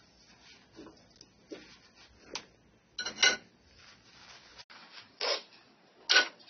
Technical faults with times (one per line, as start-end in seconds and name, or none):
0.00-6.49 AAC compression
4.62-6.49 input switched to a poorer device